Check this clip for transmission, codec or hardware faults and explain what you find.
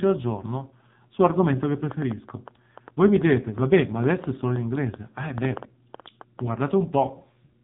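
Two faults are present. One affects the whole clip, and a burst of clicks covers most of the middle.

AMR narrowband mobile codec, throughout. Nothing above 4 kHz survives. The speech sounds buzzy and synthetic, which fits a low rate near 5.9 kbps.

Train of clicks, 1.63 s to 6.40 s. About 30 similar pops arrive unevenly, roughly five per second, peaking around 10 dB above the speech. Nearby interference is the likely cause.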